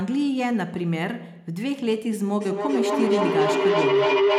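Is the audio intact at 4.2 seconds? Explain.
No. At 4.2 s the clip is inside a feedback howl that begins at 2.41 s and runs to the end. Two devices in the same room on one call form a loop from microphone to loudspeaker and back with gain above unity, so each pass returns louder. The repeats, about 0.3 s apart, narrow to a tone of around 400 Hz that rises to about 5 dB above the speech.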